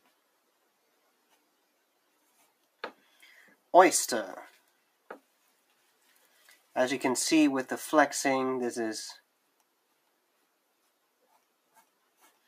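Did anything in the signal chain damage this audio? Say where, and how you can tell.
Yes, in call processing: sound cut by the noise suppressor between 6.09 and 6.57 s. It mistook sound for noise and dipped it by about 9 dB.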